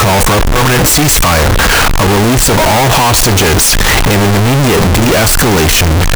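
Throughout, the speech is nearly square and harsh at an almost fixed, high level, with background noise as loud as speech, likely float read as integer (32-bit float samples taken as integers). Unlike clipping, quiet passages stay equally loud.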